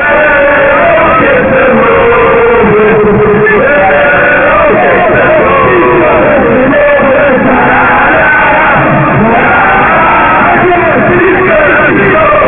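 Aliasing runs from start to finish. The audio was brought down to a much lower sample rate with no anti-alias filter beforehand, which fits a drop from 48 kHz to about 6 kHz. Everything above the new 3 kHz limit folds back below it as false, unrelated tones, sitting roughly 15 dB under the wanted signal. High-frequency content turns gritty and metallic, and the spectrum stays dense right up to the 3 kHz edge instead of rolling off.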